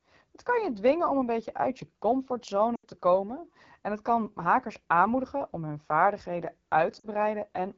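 Throughout, the speech carries AMR wideband (HD Voice) codec damage: a rough, raspy texture with hissy, noise-filled highs. This points to one of the lowest modes, around 8.85 kbit/s, and differs from narrowband coding, which would sound muffled rather than raspy.

From 2.75 to 2.85 s, just before "te komen en het", lost AMR speech frames take out about 80 ms. The decoder repeats the previous sound with falling level, so it drops to near silence within two frames rather than the hard cut or click of a plain dropout. At 7.00 to 7.06 s, right after "aanmoedigen om hun vaardigheden", a shorter 40 ms loss fades the voice to near silence, and it comes back weak or rough for a moment.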